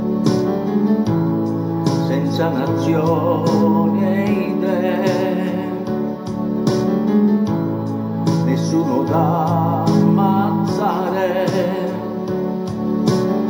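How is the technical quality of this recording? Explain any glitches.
The recording has one fault, present for the whole clip.

Crude rate conversion, throughout: the audio was resampled by simply repeating the nearest sample, which points to a 3:2 step from 32 kHz up to 48 kHz. This leaves a gritty, inharmonic fizz, roughly 30 dB below the sound, that follows loud and bright passages. On a spectrogram, faint mirrored partials appear above 16 kHz. The waveform shows small stair-steps.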